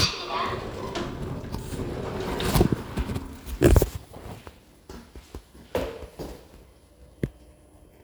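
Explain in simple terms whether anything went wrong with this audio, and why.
Nothing went wrong here: the recording shows no audible technical fault at any point.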